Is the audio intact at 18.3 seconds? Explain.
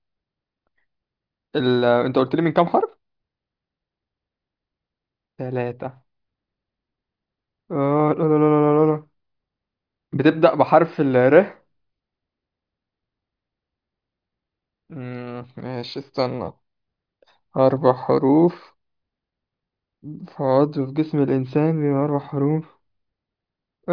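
Yes, at 18.3 seconds the speech is intact, with no fault in the audio at that moment.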